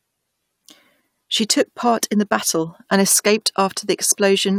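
No technical faults can be heard anywhere in the recording, which holds steady throughout.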